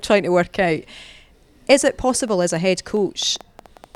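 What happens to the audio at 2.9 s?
A train of clicks runs from 2.28 s to the end, about six irregularly spaced pops per second as loud as the speech, likely from interference or a faulty connection.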